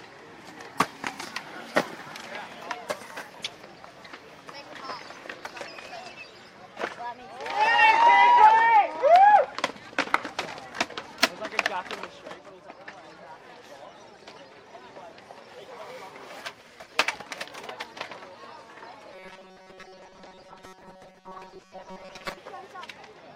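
Robotic sound from repeated short buffers runs from 19.14 to 22.38 s. The sound turns into a stiff, metallic buzz at 188 Hz, likely because audio arrived too slowly and a fragment of roughly 5.3 ms was looped over most of the missing material.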